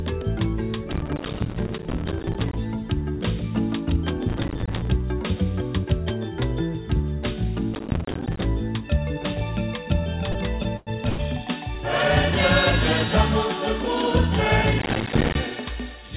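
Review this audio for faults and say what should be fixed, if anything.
Processor overload crackle appears at 0.93 to 2.56 s, 4.29 to 4.88 s, 7.74 to 8.46 s and 14.79 to 15.35 s. Each time the processor repeatedly failed to finish its short audio buffers, which fits buffers of around 5 ms. Every missed deadline dropped in a brief hard-edged silence, and dozens of these in a row make a gritty crackle over the sound. Reducing processing load or using a larger buffer would prevent this.

Repeated stalls (stutter) occur from 10.32 to 11.21 s. Packets arrived late, so the jitter buffer ran dry four times, and the receiver stretched the last sound to fill about 245 ms, or 28% of that stretch. The longest wait was 102 ms. Nothing is lost, but the audio drags and stutters. A deeper, adaptive jitter buffer or a steadier network path would prevent it.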